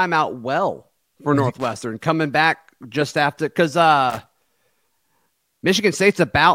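At 1.60 s a burst of loose connector crackle breaks into the speech and lasts until 1.76 s, just before "coming back just after". It returns from 4.10 s to 4.57 s, right after "back just after because". A worn or dirty contact is making and breaking as it moves. The signal is chopped on and off in rapid, uneven bursts. The result is a ragged, scratchy crackle over the speech.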